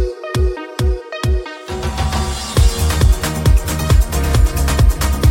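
Nothing is technically wrong with the audio in this clip.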